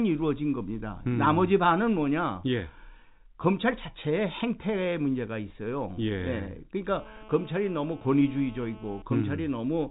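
From 6.92 to 9.02 s there's GSM phone buzz, a nearby handset's bursts rectified into a steady, raspy 217 Hz drone about 22 dB under the speech.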